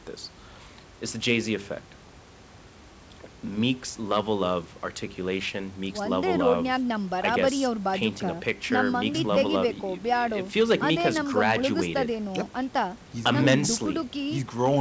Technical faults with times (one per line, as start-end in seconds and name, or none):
none